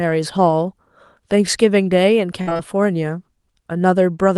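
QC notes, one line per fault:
2.41–2.61 s: repeated packet loss (robotic sound). Four gaps in under a fifth of a second, the longest 55 ms, each patched by extending the previous sound. About 59% of the stretch is fill, so it chops rather than dropping out once.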